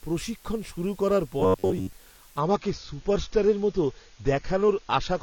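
A constant, even hiss sits under the speech for the whole clip, about 30 dB below it. This is low bit depth with dither. The noise level fits 8-bit audio, with dither turning the rounding error into smooth white noise rather than distortion.

From 1.40 to 1.93 s, just after "প্রশিক্ষণ শুরু করার", the speech turns into a rigid, metallic buzz at 93.8 Hz. This is robotic sound from repeated short buffers, likely caused by late audio. A slice of about 10.7 ms replays over and over while about half of the real audio is skipped.

At 2.40 s the quality drops suddenly, with no gap, and stays low to the end. Codec artefacts rise. This is an adaptive stream at a lower bitrate. The sound points to a switch from about 96 kbit/s to 24 kbit/s AAC.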